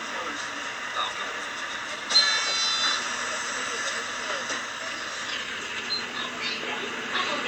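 No faults detected in this recording of sounds: nothing audible to flag at any point.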